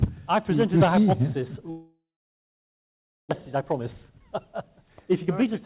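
At 1.7 s the sound breaks off into a fading buzz that carries on briefly and then sinks into near silence, which takes up most of the gap until the audio returns at 3.33 s with some 0.9 s of material simply gone. This is likely a long network dropout: no packets arrived, so the receiver stretched the last sound to cover the hole, then gave up and left quiet until the stream resumed, roughly 0.7 s later than before.

From 3.56 s to 5.53 s the audio runs noticeably quick and slightly hurried, about 110 percent of normal speed, yet its pitch stays put. That is a jitter buffer speed-up. After the dropout the buffer was holding more audio than it wanted, so the receiver trimmed out short pitch-period-sized slices over and over, discarding around a fifth of a second in total to pull the delay back down. Throughout, the call path passes nothing above 4 kHz, which fits G.711 mu-law at 64 kbps.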